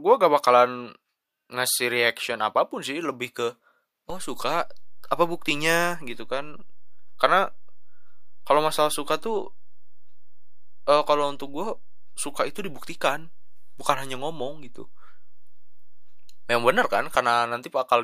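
A speech recording with a DC step: at 4.10 s the waveform's zero line jumps by about -30 dBFS and holds there until 17.15 s, where it steps back. Each jump sounds as a short low thump while the speech runs on unaffected. On the waveform the whole trace sits displaced from centre between those times. On a spectrogram each step shows as a brief vertical smear concentrated at the lowest frequencies. The cause is an input offset being switched in and out, or a converter recalibrating.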